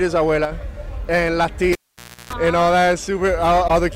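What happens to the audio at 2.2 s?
Cable pulled and plugged in, from 1.73 s to 2.33 s: a live lead is yanked out with a pop, leaving about 0.55 s of near silence. As the plug goes back, a partial tip-only contact lets a 60 Hz mains buzz through for about 0.33 s before a second pop restores the sound.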